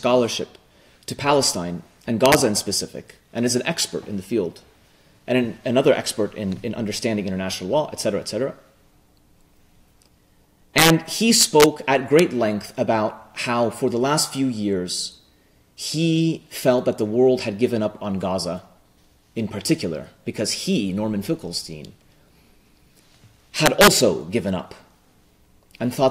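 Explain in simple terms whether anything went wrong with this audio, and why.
Integer overflow: loud peaks exceeded the largest storable number and wrapped to the opposite extreme, causing harsh cracks at 2.26–2.35, 10.78–10.90, 11.41–11.64, 12.19 and 23.66–23.88 seconds.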